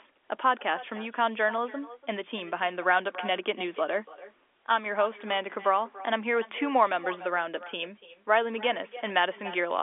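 Speech heard through a G.711 telephone band of about 300 Hz to 3.5 kHz carries echo with no canceller throughout. Each phrase returns about a third of a second later, about 17 dB quieter, because the far end's loudspeaker feeds its microphone and nothing removes the returned signal.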